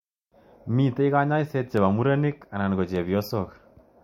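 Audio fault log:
1.77 s and 2.96 s: dropped samples. Each is a single sharp click in the speech, likely from a fraction of a millisecond of samples going missing so the waveform jumps straight to a later value. Unlike a dropout, no sound is audibly removed, only the instantaneous step.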